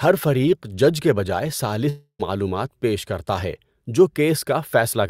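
From 1.89 to 2.21 s the speech gives way to a fading buzz that sinks into about 80 ms of silence, likely a long network dropout. About 0.3 s of speech is lost, and unlike a brief, smoothly concealed packet loss, the gap audibly decays.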